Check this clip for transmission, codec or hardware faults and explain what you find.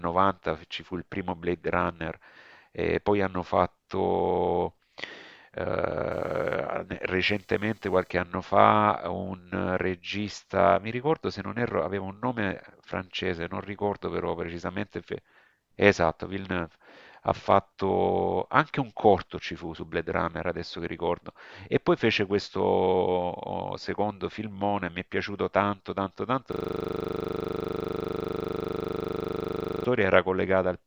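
Two hardware-side faults are present in this speech clip: computer activity noise early on and a system hang loop near the end.

From 6.11 to 8.11 s there is computer activity noise, a buzzy chirping pulse train at roughly 500 Hz sitting about 40 dB below the speech. It comes from processor, graphics or mouse load shifting the ground shared with the audio circuitry, so the interference tracks the machine's workload rather than the speech. It is heard as a faint electrical whine or scratch.

From 26.52 to 29.85 s the system hang loop appears. The driver or host stalled while the audio hardware kept replaying the same 40 ms stretch of its ring buffer, more than 80 times in a row. At a 25 Hz repetition rate this comes across as a rapid machine-gun stutter of one frozen fragment. It replaces the speech until playback resumes.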